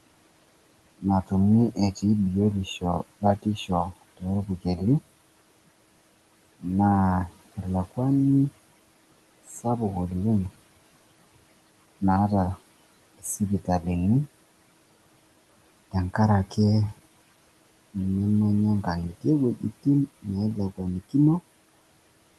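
Between 4.46 and 4.8 s, the noise suppressor cuts speech. It mistakes part of the speech for background noise and turns it down, by about 15 dB at the deepest point. Roughly a tenth of a second is affected. Those sounds come out swallowed and faint.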